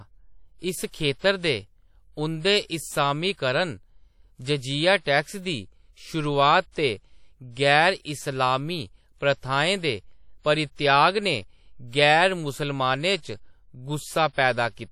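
Throughout, the speech sounds ringing and washy, with hiss breathing alongside it; likely WMA compression, whose plain damage fits a bitrate near 48 kbps.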